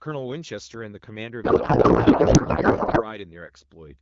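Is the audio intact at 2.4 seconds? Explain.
No. At 2.4 s the clip is inside a codec payload misread that runs from 1.43 s to 3.09 s. The AMR-WB frames were packed in octet-aligned format but unpacked as bandwidth-efficient, so the decoder takes bits from the wrong field positions and still treats each frame as valid. The speech there is replaced by garbled noise and warble that barely tracks it, until the packing formats match again at 3.09 s.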